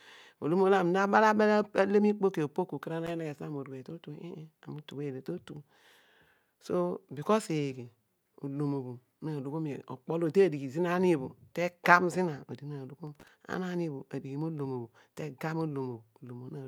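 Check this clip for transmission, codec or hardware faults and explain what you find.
Two bursts of loose connector crackle are present, from 3.07 to 3.11 s and from 13.07 to 13.28 s, the second lasting about a fifth of a second. A worn or dirty contact is making and breaking as it shifts, chopping the speech signal and throwing pops where DC sits on the line, so each burst sounds like irregular scratching. On a waveform, expect ragged spikes and dropouts; a spectrogram shows scattered broadband vertical streaks.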